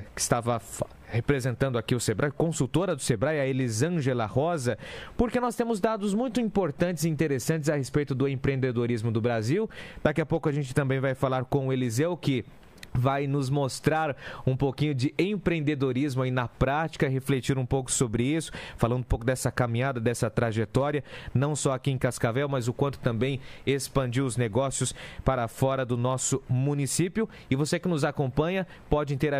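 No technical faults are audible.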